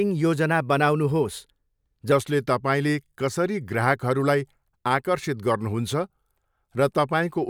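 A wrong sample rate fault begins at 2.12 s and continues to the end. From that point the samples are played back more slowly than they were captured, with no conversion between rates. Speed and pitch fall together by a factor of about 0.919, lowering the speech by 1.47 semitones, which fits 48 kHz audio played at 44.1 kHz. The voice turns slightly deeper and more sluggish.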